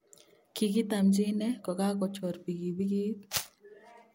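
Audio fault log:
No fault is heard in this speech clip.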